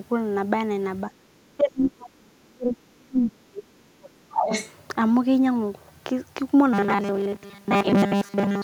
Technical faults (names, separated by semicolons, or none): speech suppressed in double talk; other side's voice leaking through; robotic sound from repeated short buffers